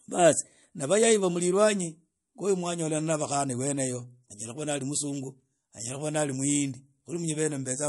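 Throughout the speech, the sound likely passed through MP3 compression at a low bitrate, consistent with roughly 48 kbps. With so few bits available, the encoder trims the treble at a fixed cutoff and discards weaker frequency lines, which then flicker in and out from frame to frame. The damage is plainly audible: a dull top end, a watery, swirling texture, metallic chirps on s sounds, and consonant attacks that smear instead of landing cleanly.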